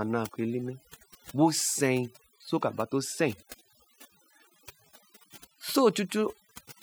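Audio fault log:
Throughout: overdone noise removal. Noise reduction was set too aggressively for this speech recording. Frequency bands close to the estimated noise floor get cut hard or muted outright, so the background drops and breaks up into twinkling specks, while softer speech detail is stripped.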